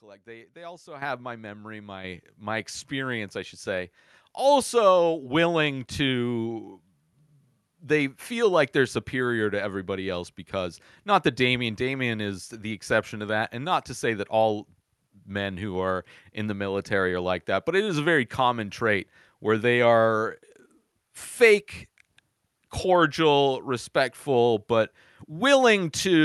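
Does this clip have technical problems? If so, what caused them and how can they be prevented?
Yes. The speech and the background jump up in level together, twice: by about 10 dB at 1.02 s, between "they they also" and "my memory", and by about 6 dB more at 2.04 s, just after "my memory". This is the microphone volume stepped up. The call software judged the input too quiet and raised the device's input gain in single steps, so everything reaching the microphone gets louder at once. To prevent it, turn off automatic microphone level adjustment and set a fixed input volume.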